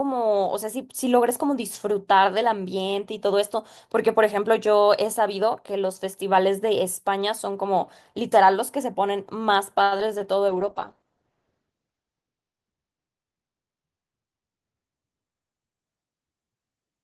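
At 9.83 s the speech hangs for 80 ms, from 9.83 to 9.93 s, in a short stall from a late packet. The next packet hadn't arrived, so the receiver's jitter buffer ran dry and it kept extending the last sound until the data caught up, then resumed exactly where it left off. Nothing is lost, but one sound is held unnaturally long. On a spectrogram the harmonics run flat and unchanging for that stretch, and the waveform shows a repeated, slightly decaying cycle.

Two short concealed packet losses follow. From 9.97 to 10.09 s about 20 ms of audio never arrived, and the receiver bridged the gap by continuing the preceding sound for 10 ms, stretching the timing slightly. From 10.18 to 10.22 s another 20 ms went missing and was replaced with 19 ms of synthesised continuation. Both come across as quick smears or wobbles. A spectrogram shows brief blurred patches where the fine detail breaks and then blends back, and the waveform shows small joins at each edge.

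From 10.49 to 15.92 s there is a call bitrate drop. The estimated bandwidth fell, so the encoder went from 32 kbps down to 9 kbps, staying at that lowest rate for 1.49 s, and narrowed the coded band from 20 kHz to 8 kHz. The speech turns muffled and watery. On a spectrogram, everything above 8 kHz is sharply cut off, and the remaining energy looks coarse and blocky.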